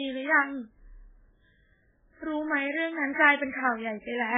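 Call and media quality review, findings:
Speech band-limited for the whole clip, nothing above 3.7 kHz. Heavy watery, swirling texture. Sibilants smeared and chirpy. Likely MP3 compression at a very low bitrate, which fits roughly 8 kbps. Encoder starved of bits. Treble removed outright at the cut-off. Weak spectral lines dropped, flickering in and out between frames. That flicker gives the swirl.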